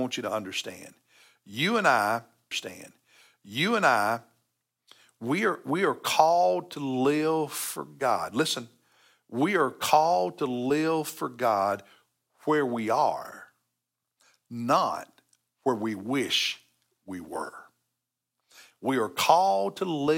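Speech, and there's a stream segment repeated right after "and I": from 2.51 to 4.50 s the same stretch plays a second time, adding about 1.98 s, with a small blip at the jump back. The player fetched or queued that segment twice.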